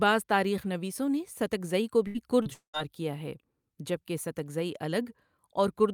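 Speech, with repeated packet loss (robotic sound) from 2.07 to 2.92 s: four gaps are concealed by extending preceding sound, leaving choppy speech with pieces missing.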